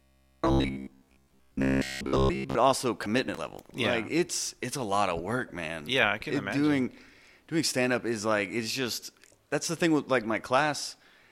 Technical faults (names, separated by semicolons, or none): robotic sound from repeated short buffers